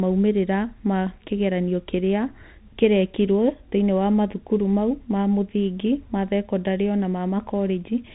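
Bluetooth CVSD headset codec damage runs through the whole recording and is plainly audible. Each sample is coded as a single up-or-down step, which fits a 64 kbps link. Nothing passes above about 3.8 kHz, and s sounds turn scratchy over a granular hiss beneath the speech.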